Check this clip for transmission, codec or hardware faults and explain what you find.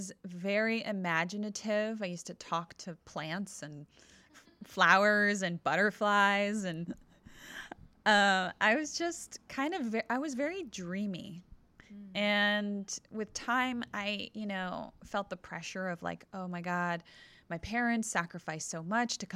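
Nothing to report: no faults turn up anywhere in the speech.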